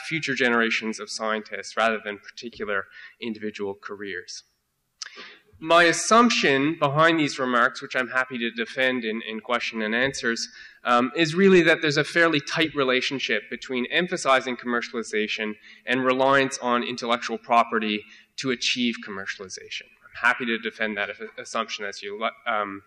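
No technical faults can be heard anywhere in the audio, and the signal holds steady throughout.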